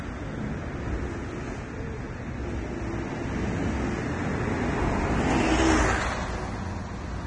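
The audio is a short recording of sounds. Throughout, nothing reaches above about 9.7 kHz. The treble sounds hissy and grainy, tones are roughened, and attacks are smeared. The cause is likely heavy Vorbis compression, which fits a low bitrate of roughly 24 kbps.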